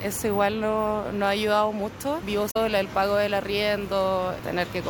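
Damaged data in the compressed stream appears from 2.47 to 2.56 s. Corrupted bytes there make the decoder misread its frames and lose sync until it finds a valid frame header again, and the roughly 90 ms gap comes out as a chirp, squawk, click or short hole.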